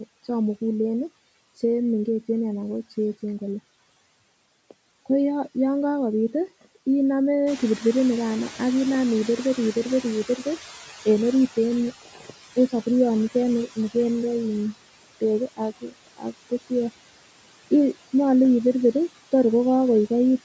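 Noise suppressor artifacts run through the whole clip. The suppressor pulls down bands it judges to be steady noise by about 17 dB, frame by frame. The background dips between phrases and swells under them. On a spectrogram this shows as patchy, blinking noise speckle rather than an even floor, all of it below 8 kHz, where the call microphone processing band ends.

From 7.46 to 11.93 s the noise suppressor is catching up. The room noise jumps by about 12 dB at roughly 7.5 s, and the suppressor's noise estimate lags. The louder background comes through only lightly reduced at first and then sinks over about 4.5 s, finally reaching a cut of about 13 dB. On the waveform the floor steps up sharply and then tapers down.

Speech is cut by the noise suppressor at 12.02 to 12.32 s. About 150 ms of soft speech is treated as noise and drops by up to about 16 dB, so it sounds swallowed. It happens again at 15.81 to 16.33 s, just after "nikende in beek", where a drop of about 18 dB affects roughly 200 ms. 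Both show as sudden gaps or thinned energy inside speech on the spectrogram.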